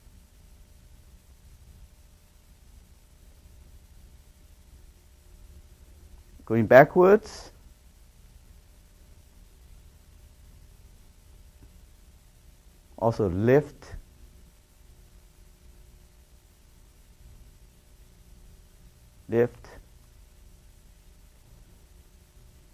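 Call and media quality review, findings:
Nothing to flag here, no faults turned up anywhere in the clip.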